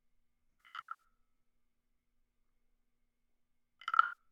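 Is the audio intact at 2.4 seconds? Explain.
Yes, at 2.4 seconds the sound plays through cleanly, with no dropout, click, distortion or other fault at that moment.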